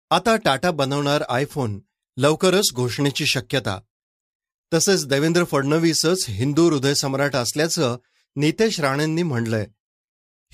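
A speech recording with no audible technical faults.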